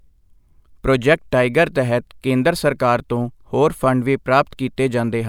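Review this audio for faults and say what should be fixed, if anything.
Nothing in the recording needs fixing: the speech signal holds steady throughout with no audible technical faults.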